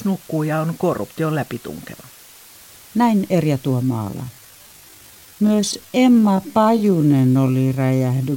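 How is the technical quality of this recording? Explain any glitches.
The recording has two faults: constant background hiss and a dragging second half.

Low bit depth with dither: the speech is quantised to 7 bits with dither, so rounding error becomes an even hiss around 25 dB below the speech throughout.

Time-stretched section: from 3.80 s to 8.36 s the speech slows to about 0.59 times its pace while pitch stays unchanged, likely from software stretching the audio to fill a length.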